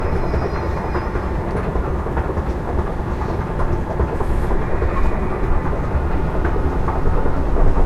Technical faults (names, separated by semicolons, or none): none